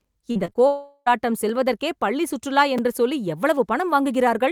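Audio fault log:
0.31–0.57 s, repeated packet loss (robotic sound): four short gaps, longest 38 ms, were each patched by extending the last sound, leaving choppy, robotic speech with about 100 ms missing.
0.67–1.08 s, long network dropout: audio likely stopped arriving for about 400 ms; the last sound was stretched into a fading buzz, ending in 40 ms of silence.
1.49 s and 2.78 s, repeated buffer: fresh audio came late, so a 5 ms buffer replayed once before "பள்ளி சுற்றுலா என்று சொல்லி" and twice before "என்று சொல்லி", heard as brief clicks.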